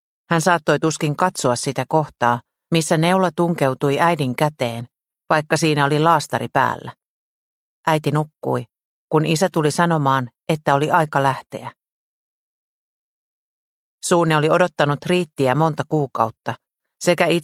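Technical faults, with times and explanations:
No technical faults can be heard anywhere in the signal.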